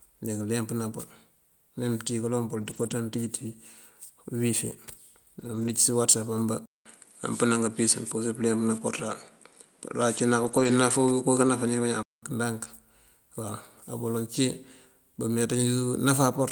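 It's a speech recording with two kinds of trouble. There are four short patches of lost packets rebuilt from error correction, at 2.61–2.91 s, 5.39–5.73 s, 10.43–10.69 s and 11.47–11.49 s. There's no gap in any of them. The audio just turns rough and grainy for a moment because the decoder is playing the low-bitrate backup copy carried in the next packet. The stretches come out to about 160, 180, 140 and 20 ms, which fits 8, 9, 7 and 1 lost 20 ms frames. From 6.66 to 12.23 s the sound goes duller and boxier. Nothing comes through above 11.4 kHz, there's a new noise floor roughly 40 dB under the signal, and the level shifts by around 5 dB. It opens with a 200 ms silence at the changeover. That's most likely the input switched to a poorer device partway through, then back again.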